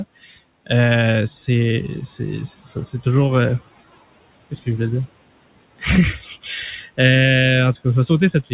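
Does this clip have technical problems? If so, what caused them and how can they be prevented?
Yes. Noise suppressor artifacts run through the whole clip. The suppressor pushes the room noise down by about 20 dB, band by band. The leftover noise sinks between phrases and swells under speech. A gentler suppression setting would prevent this.

Speech cut by the noise suppressor occurs at 6.18 to 6.48 s and at 6.72 to 6.99 s. The suppressor took quiet speech for noise. It dropped it by about 11 dB, then about 13 dB. Those sounds come out faint. Less aggressive suppression would prevent this.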